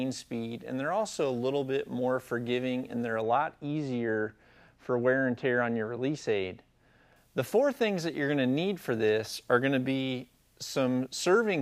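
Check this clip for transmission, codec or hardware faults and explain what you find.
One fault is present. From 3.22 to 7.16 s the sound turns dull and muffled: de-emphasis applied wrongly, an unneeded treble cut sloping down to about 13 dB lower at 10 kHz than at 1 kHz.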